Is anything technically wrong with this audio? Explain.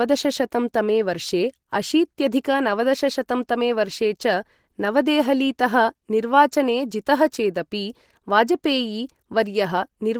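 Yes. Throughout, the speech sounds muffled, hoarse and grainy, likely from Opus compression. The codec's hybrid speech mode at a low bitrate, which fits about 16 kbps, drops fine detail.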